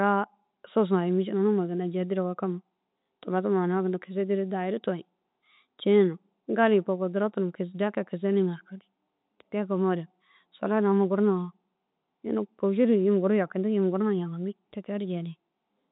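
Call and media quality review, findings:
No faults found in this speech recording. The working call path is audible as a narrow telephone band with nothing above 4 kHz, consistent with G.711 coding.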